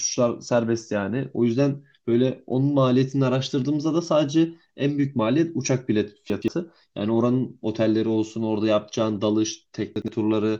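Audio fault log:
6.30–6.48 s, chunks out of order: a 60 ms chunk plays two chunks late, so the speech jumbles briefly with three hard joins.
9.96–10.08 s, chunks out of order: a 60 ms chunk lands one chunk late and swaps places, giving a short garbled moment and three hard joins.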